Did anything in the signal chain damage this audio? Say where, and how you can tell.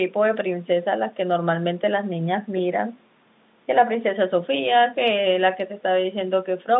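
No, nothing in the signal chain damaged this speech.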